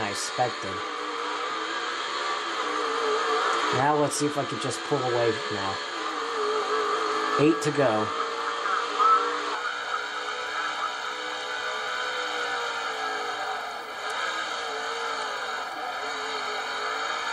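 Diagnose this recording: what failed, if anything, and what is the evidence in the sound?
From 9.55 s to the end the sound turns hollow and phasey. That's channel delay (comb filtering), likely at the driver or buffer stage: one channel runs about 1.5 ms late, and the mono sum cancels at evenly spaced notches starting near 400 Hz.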